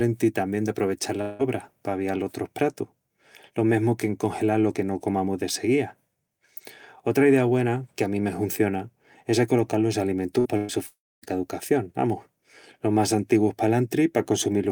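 At 1.21 s, just after "tamién d'aprovechal", the speech stops moving forward for about 0.2 s. The last sound is stretched and fades before the audio resumes at 1.42 s with that stretch gone. On a spectrogram the pattern runs flat and smeared, then the normal pattern picks up abruptly. This sounds like a long network dropout, likely, though here the concealment covers the whole gap with no silence.

Two bursts of packet loss follow "hunciona es acolocal los". The first runs from 10.39 to 10.48 s and loses about 60 ms. The second runs from 10.57 to 10.72 s and loses about 120 ms. In each, the receiver holds the last sound and turns it down, giving a brief held sound that dies away. The waveform shows a shrinking, unnaturally regular stretch, and the spectrogram shows horizontal streaks, before speech jumps ahead.

From 10.87 to 11.25 s a longer dropout, likely, removes about 0.36 s. A short fading continuation of the previous sound gives way to roughly 0.27 s of flat silence, visible as an empty band on the spectrogram and a flat line in the waveform. 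The audio returns at "caducación amus los más".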